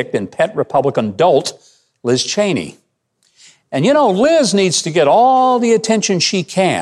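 Nothing goes wrong anywhere in this short bit of speech, so there's no fault to point to at any moment.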